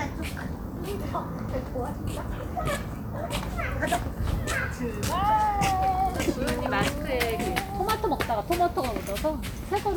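No technical faults can be heard anywhere in the recording.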